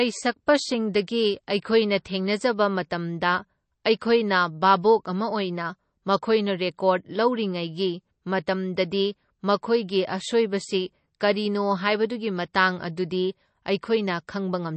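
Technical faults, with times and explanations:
Throughout, MP3 compression: the speech sounds watery and swirly, with chirpy, metallic s sounds, smeared onsets, and no treble above 8.3 kHz. This is likely a heavily starved MP3 encode, fitting a bitrate around 32 kbps, where the encoder removes the top band and zeroes weak frequency lines that switch on and off between frames. A spectrogram shows a flat ceiling at 8.3 kHz and flickering holes and islands in the upper bands.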